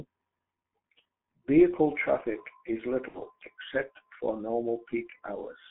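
From start to finish the speech carries G.723.1 codec damage: a band from about 150 Hz to 3.5 kHz, a muffled, hoarse tone and smeared consonants. This is heavier than plain telephone band-limiting, fitting a 6.3 kbit/s coder whose slow 30 ms frame updates blur the sound.

At 3.08 s, right after "traffic is", VoIP packet loss concealed by the speech codec lasts until 3.21 s, before "except for". About 60 ms of audio, likely two frames, was lost. The decoder stretched the last sound into a fading buzzy tone or coloured noise, and the speech stays weak as it recovers, unlike a clean dropout or click.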